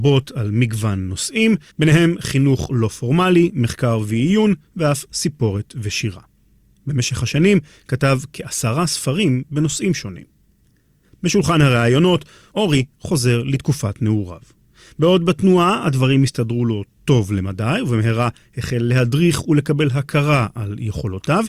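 Nothing goes wrong anywhere in this recording; there are no faults to point to from beginning to end.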